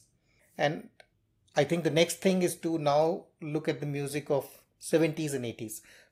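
No technical faults can be heard anywhere in the recording.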